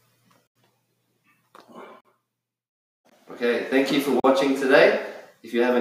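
The audio drops out three times as a block of digital silence: 0.47 to 0.56 s (about 85 ms), 2.01 to 2.05 s and 4.20 to 4.24 s (about 43 ms each). Each cuts out and back with no fade. The lengths fit buffers of 4096 and 2048 samples going unfilled. Between 1.10 and 1.62 s the sound is cut by the noise suppressor, which mistakes parts of it for noise and pulls them down by up to about 17 dB, for around 150 ms in total, so sustained or decaying portions sink or end early.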